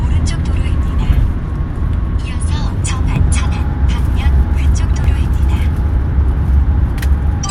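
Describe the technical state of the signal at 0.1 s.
At 0.1 s the audio is intact, with no technical fault present at that moment.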